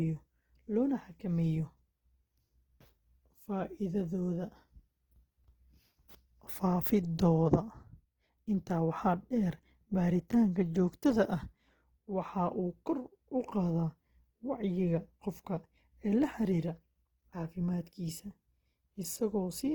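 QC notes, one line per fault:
throughout: Opus compression. The speech has a rough, grainy texture, and the codec damage is plainly audible, yet the top end is not cut back and extends to about 20.2 kHz. That combination points to the encoder's music (CELT) mode running short of bits, likely at a rate around 16 kbps. It keeps each band's energy but refills starved bands with folded or noise-like content rather than leaving gaps, so detail turns grainy instead of swirling.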